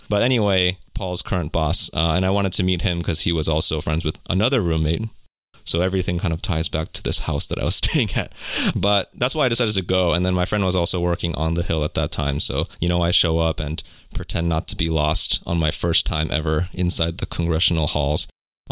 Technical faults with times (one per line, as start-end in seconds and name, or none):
none